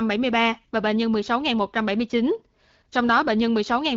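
No faults in the speech; the AMR wideband (HD Voice) path, whose light codec character points to a rate around 12.65 kbit/s, is working as intended.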